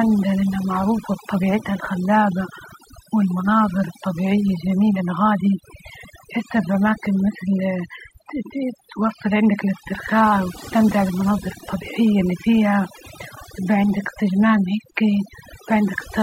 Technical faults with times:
0.00-16.22 overdone noise removal

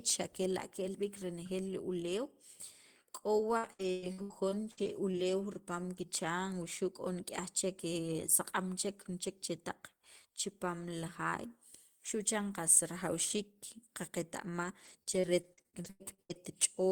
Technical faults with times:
3.57-5.15 repeated packet loss (robotic sound)
14.45-16.37 repeated packet loss (robotic sound)

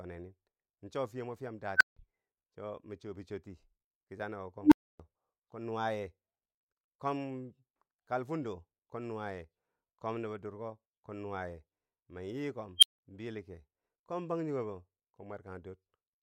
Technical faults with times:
1.76-1.97 unstable filter
4.62-5.00 unstable filter
12.78-12.99 unstable filter

